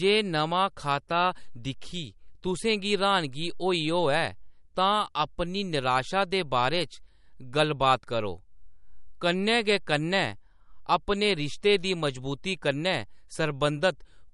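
Throughout the speech, the treble stops at 11.2 kHz, and the highs sound watery and swirling, with chirpy s sounds and smeared attacks. The likely cause is MP3 compression near 48 kbps: starved of bits, the encoder cuts the top band and toggles weak frequency lines between frames.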